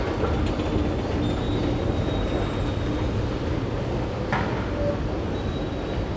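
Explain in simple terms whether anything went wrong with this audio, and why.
Listening through these sounds, nothing went wrong that a listener would notice.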